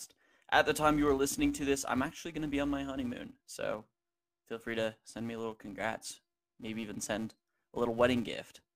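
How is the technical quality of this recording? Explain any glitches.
The recording's quality is compromised by one continuous fault that runs from start to finish.

Filter restarted on every block, present throughout the speech: a filter in the chain loses its memory at each block boundary and starts from silence, so each block opens with a small transient. These repeat at 345 Hz, which fits a 128-sample block, and they are heard as a steady buzz riding under the speech, growing louder and softer with its level.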